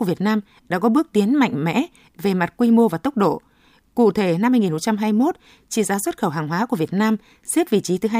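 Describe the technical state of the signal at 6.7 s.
Around 6.7 s, the signal is intact, with nothing audible to mark it as faulty.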